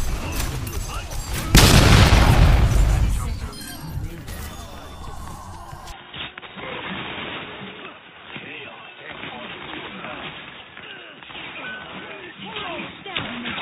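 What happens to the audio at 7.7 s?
At 7.7 s the audio is inside a stretch that sounds like the input switched to a poorer device. The change starts at 5.92 s and lasts to the end. Nothing above 3.8 kHz comes through, so the sound turns dull and boxy. The level drops by about 5 dB. A new noise floor appears, roughly 40 dB below the signal. There is no gap at the switch. The likely cause is the system moving to a narrower-band microphone or a headset call profile.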